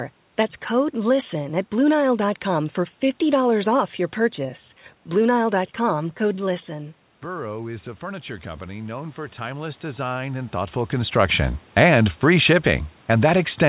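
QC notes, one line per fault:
5.93–10.82 s: automatic gain rising. The input fell about 11 dB, so the gain control slowly added about 9 dB, swelling voice and room noise together.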